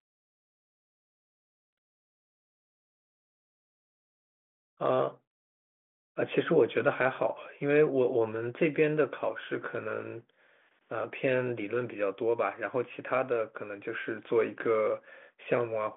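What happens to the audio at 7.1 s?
Nothing goes wrong at 7.1 s: the speech passes intact there, carrying only the narrow telephone band of the G.726 ADPCM path, which at 40 kbit/s leaves at most a faint trace of its coding hiss and lets nothing through above about 3.8 kHz.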